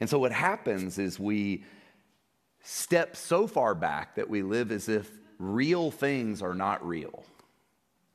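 A wireless microphone noise hit occurs from 0.75 to 0.85 s, just after "so what" and before "is we". For roughly a tenth of a second the radio link from the analogue FM microphone fades as reflected signals cancel at the receiver, so the receiver's own noise swells over the speech. It is heard as a brief swish of static before the clean signal returns.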